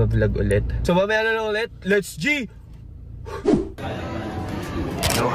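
Right at 0.51 s there's a single sharp snap, an electrical switching spike, and it's over in a couple of milliseconds. It sits on top of the sound rather than replacing anything, peaking somewhere around -20 dBFS. The likely culprit is a nearby switch, motor or static discharge throwing a brief arc that the audio line picked up and passed straight through as a tight click.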